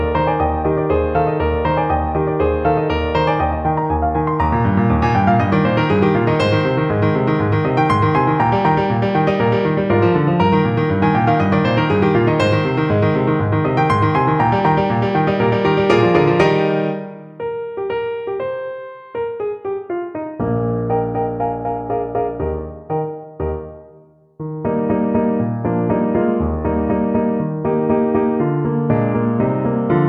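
Listening through the recording, nothing stood out as a technical fault at any point.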